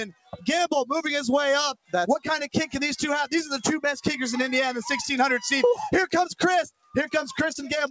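What you've got here is non-speech audio run through a call chain with a speech noise suppressor left on, so held and fading parts keep sinking and the level pumps by around 5 dB throughout. On top of that, sound cut by the noise suppressor shows up as deeper dips from 0.1 to 0.41 s (about 18 dB), 1.75 to 1.93 s (about 21 dB) and 6.71 to 6.94 s (about 20 dB). Nothing comes through above 8 kHz, which fits a G.722 WebRTC call path.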